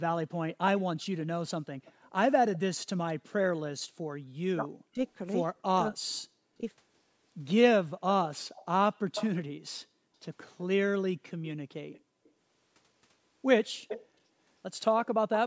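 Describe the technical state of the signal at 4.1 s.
An echo leak runs through this moment, from 0.49 s to 15.37 s. A delayed copy of the sound returns about 274 ms behind it, roughly 10 dB down. The likely cause is a far-end loudspeaker whose echo canceller failed to remove what its microphone picked up.

Background gated by the echo canceller begins right at 4.1 s and lasts until 4.28 s. While the loudspeaker played, the canceller pulled the microphone down hard, by about 40 dB at its deepest. The room sound briefly drops out, for around a tenth of a second in total.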